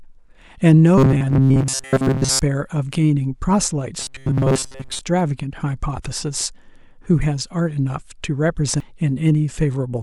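From 0.98 to 2.40 s, and again from 4.01 to 5.01 s, the speech turns into a stiff, metallic buzz locked at 134 Hz. That's robotic sound from repeated short buffers, likely caused by audio arriving too slowly. Most of each stretch is a replay of a tiny slice of about 7.5 ms, looped in place of the real audio.

At 8.80 s there's a brief blip, which points to damaged data in a compressed stream. Some bytes in the encoded stream were wrong, so the decoder misread that spot and lost sync for an instant before finding the next frame and carrying on.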